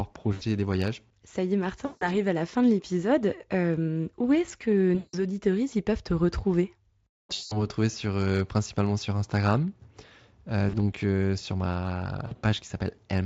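Speech, with VoIP packet loss concealed by the speech codec at 0.33, 1.85 (after "y est"), 4.95, 7.33 (before "sur euh principalement sur"), 10.69 (before "euh sur") and 12.27 s. Each gap lasts 40 to 180 ms, and the decoder stretches the last pitch into a fading buzz or coloured noise. On a spectrogram this shows as smeared, flattened harmonics. On the waveform it is a repeating, decaying pattern.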